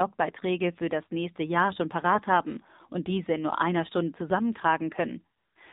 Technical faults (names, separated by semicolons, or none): AMR narrowband mobile codec; AMR comfort noise